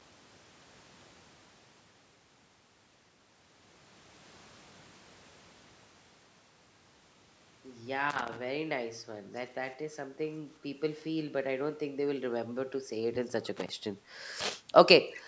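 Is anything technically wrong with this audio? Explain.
Yes, there are two separate faults in this speech recording.

Loose connector crackle appears twice: from 8.10 to 8.37 s and from 13.57 to 13.69 s. A worn or dirty contact in the signal path keeps making and breaking as it shifts, which chops the audio on and off, and any DC on the line turns each break into a pop. The result is a ragged, irregular burst of scratching. A dropout from a network call leaves clean gaps, while this fault sounds rough and uneven.

An echo leak is heard briefly from 15.14 to 15.22 s. A faint copy of the speech returns about 394 ms late and roughly 15 dB below the direct sound. This is likely the far end playing the call through a loudspeaker, where the echo canceller failed to remove everything its microphone picked up and sent that residue back. It differs from room reverberation because it is a distinct delayed repeat rather than a smooth tail, and it sounds like a scrap of speech. 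The call's microphone processing, with nothing above 8 kHz, does not cause it.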